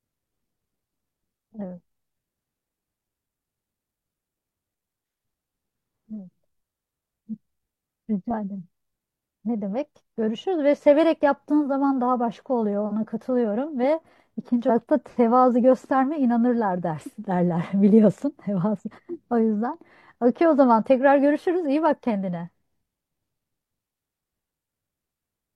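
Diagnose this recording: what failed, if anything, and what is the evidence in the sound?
At the codec stage, damaged data in a compressed stream corrupted a short stretch of frames, so the decoder misread them and lost sync while hunting for the next valid frame header. The speech is broken by a brief disruption from 14.66 to 14.71 s.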